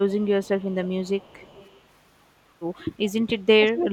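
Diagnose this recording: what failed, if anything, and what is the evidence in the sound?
Echo leak in call processing: a faint copy arrives 334 ms late, about 25 to 30 dB down, at 0.09–0.25, 0.43–0.5 and 0.71–1.81 s. It is likely far-end loudspeaker pickup that the echo canceller missed.

Speech suppressed in double talk, also call processing: level dips about 15 dB at 0.17–0.27 s and about 30 dB from 3.56 s to the end. This is likely the canceller ducking overlapping talk.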